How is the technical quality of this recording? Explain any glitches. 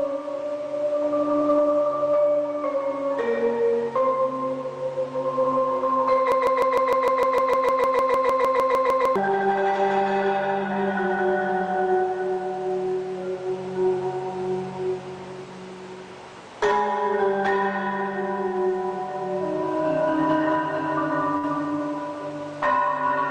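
Two glitches stand out, one long and one brief.

From 6.32 to 9.16 s there's a broken-record loop: a 152 ms piece repeats 19 times back to back, likely a stalled player or stream resending its last fragment, so that stretch of audio is lost.

At 21.37 to 21.46 s there's a burst of packet loss: the receiver stretches the last sound over a 57 ms gap as it fades, then jumps ahead, skipping about 60 ms.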